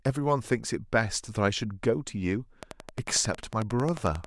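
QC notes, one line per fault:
2.63–4.25 s, train of clicks: about twenty evenly spaced ticks at 11.1 per second, poking well above the speech, likely interference or a faulty connection.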